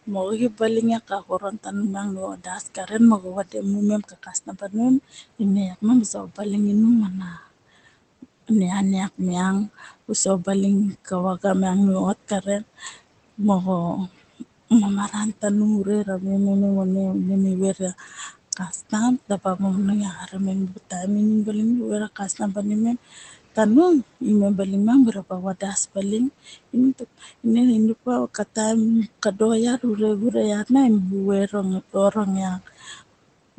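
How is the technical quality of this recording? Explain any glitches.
The recording has one recurring glitch: speech cut by the noise suppressor. It runs through almost the whole clip.

It appears from 0.07 to 11.44 s, 12.42 to 15.43 s, 17.75 to 20.92 s, 22.16 to 24.22 s, and 25.13 s to the end. The suppressor mistakes parts of the speech for noise and turns them down with the background. The dips reach about 14 to 18 dB. The first stretch loses roughly four seconds in total. Soft consonants and word endings sound swallowed or faint.

A room noise sits about 22 dB under the speech. The top end stops near 8 kHz, which fits a low-bitrate call codec.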